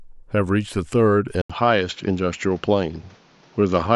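Speech recording with an abrupt change in sound at 1.42 s. An 80 ms gap of silence comes first. From there to the end, nothing above 7.3 kHz gets through, so the voice turns duller. A new background noise floor appears, roughly 35 dB below the speech. The level stays about the same. The likely cause is an input switched to a poorer device mid-recording, such as a different microphone with a narrower band and its own noise.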